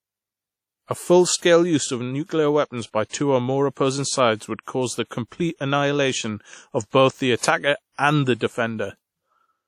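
Throughout the speech, the sound rings and turns washy, with a hiss that rises and falls with the signal and nothing above 18.9 kHz. This is likely WMA compression, its long transform blocks smearing quantisation noise across tens of milliseconds, which fits a bitrate near 48 kbps.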